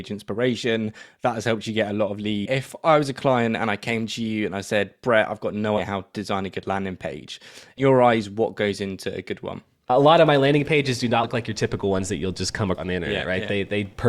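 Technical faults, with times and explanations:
1.01, 2.45, 5.77, 7.77, 11.23 and 12.77 s, compressed frames skipped: runs of 20 ms frames went missing or were rejected by the decoder, so the speech jumps forward by roughly 70 to 300 ms.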